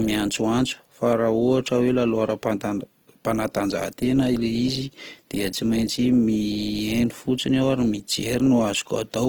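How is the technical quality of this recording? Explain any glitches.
Quality is held back by plainly audible codec damage that runs through the entire speech recording.

Throughout, the speech sounds grainy and rough, and its tonal parts turn noisy. This is likely Opus compression in CELT mode, at a rate that fits about 16 kbps. The encoder keeps each band's energy but fills starved bands with folded or noise content. A spectrogram would show full bandwidth up to about 20.2 kHz, with speckled, smeared harmonics rather than gaps.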